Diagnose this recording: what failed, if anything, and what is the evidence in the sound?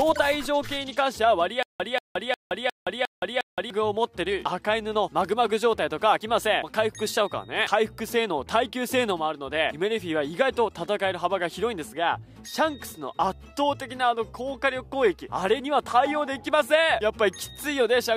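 A stutter with silent gaps runs from 1.63 to 3.70 s: one 186 ms burst of sound repeats six times, each followed by 170 ms of digital silence, so it returns every 356 ms at a steady pace. This points to the playback or streaming buffer. The likely cause is a stalled stream that, on each retry, replayed its last fragment and then ran dry. The audio due during that span never plays.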